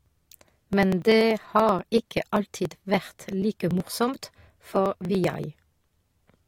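From 0.06 s to 6.40 s the speech carries periodic USB or driver dropouts. Something blocks the audio path every 0.096 s, about ten times a second. Each time, roughly 4 ms of audio is skipped outright, not replaced by silence. The waveform jumps across the gap. That jump makes a regular tick, about seventy of them in all. The ticks sound only where the speech has signal and vanish in the pauses.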